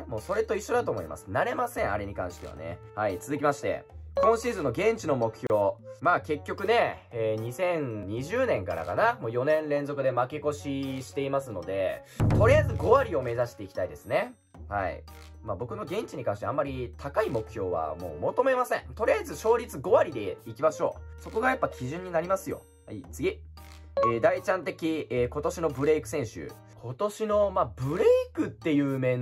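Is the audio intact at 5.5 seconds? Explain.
No. Two separately encoded pieces of the audio were joined at this point without trimming the encoder's start-up delay or the padding on the last frame, so that dead time stays in the stream. The result is a gap at a join of encoded pieces: from 5.47 to 5.50 s the sound drops out for about 32 ms, with its edges smeared by the codec, then resumes exactly where it stopped.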